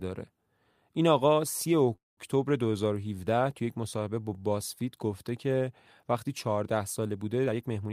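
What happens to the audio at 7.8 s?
The receiver's jitter buffer had built up more audio than its target, so from 7.46 to 7.90 s it performs a jitter buffer speed-up. It repeatedly cuts out short slices one or a few pitch periods long, trimming around a tenth of a second in total. The speech there runs at about 122% speed with its pitch unchanged, so the final stretch of the clip sounds noticeably hurried and compressed.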